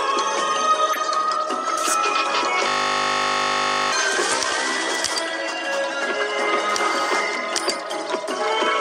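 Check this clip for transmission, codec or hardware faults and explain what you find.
There are two kinds of fault here: a handful of corrupt frames that got decoded anyway, and one system hang loop.

Corrupt frame decoded: at 0.93, 4.06, 5.88 and 8.35 s you get a short chirpy blip, each lasting 30 to 50 ms. In each case a couple of compressed frames arrived with flipped bits, and the decoder played them anyway. The misread codes and gains push energy into the wrong frequencies. The first one peaks loudest, somewhere around -10 dBFS, and the later ones are a bit quieter.

System hang loop: from 2.68 to 3.92 s the sound turns into a steady buzz. The playback side froze while the hardware kept cycling through the same ring buffer, so one 20 ms slice repeats over and over, around sixty times, at a 50 Hz rate. That loop length fits a buffer of about 20 ms. Because the loop is so short, you hear a tone rather than a stutter, and roughly a second and a half of real audio is lost.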